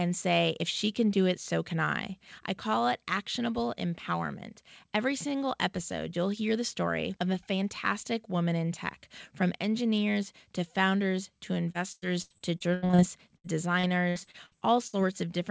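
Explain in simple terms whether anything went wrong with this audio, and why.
Repeated packet loss (robotic sound) hits at 11.72 to 13.00 s, right after "engineers to founders to", and again at 13.36 to 14.95 s. Bits of the call kept going missing, about a tenth of a second at most, and each hole was patched by stretching the previous sound, so the voice turns choppy with pieces missing.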